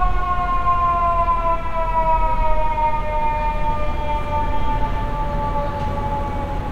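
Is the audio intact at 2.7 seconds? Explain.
Yes, the audio is intact at 2.7 seconds, with no audible fault at that moment.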